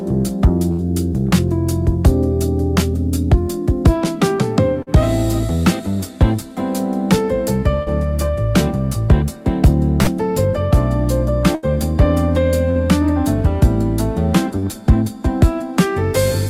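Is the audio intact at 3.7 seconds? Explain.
Yes, at 3.7 seconds the audio is intact, with no dropout, click, distortion or other fault to be heard at that moment.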